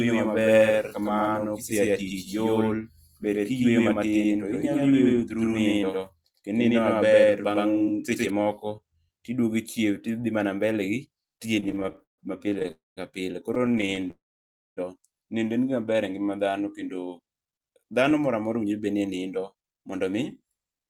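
From the very start until 8.3 s, there's a doubled audio track: a second full-band copy of the speech trails the original by roughly a tenth of a second, at about the same level. It's dry, with no room colour. Likely a slower second capture path mixed in.

Between 11.55 and 12.71 s you get repeated stalls (stutter). The jitter buffer kept running dry, nineteen times here, and the receiver stretched the last sound to cover 358 ms, about a third of that stretch. The longest hold is 145 ms, so it drags and stumbles without losing anything.

Right after, from 12.71 to 12.99 s, a call audio freeze holds the sound for 253 ms. The last sound smears and fades, then goes quiet for about 180 ms before picking up where it stopped. It's likely late packets again, and nothing's actually missing.

A second stutter runs 13.55 to 14.11 s: fourteen brief fills totalling 178 ms, none longer than 25 ms. It's a finer, choppier flutter than the first bout, with about a third of the span concealed.

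It ends in a longer freeze from 14.11 to 14.79 s. The audio hangs for 662 ms, with roughly 590 ms of silence, then resumes where it broke off. That's most likely a long packet delay rather than lost audio.

From 17.60 s to 20.87 s the jitter buffer speed-up kicks in. To shed built-up delay, the receiver snipped out tiny pitch-period pieces repeatedly, about 0.4 s in total. The speech runs at 111% speed at unchanged pitch and sounds hurried.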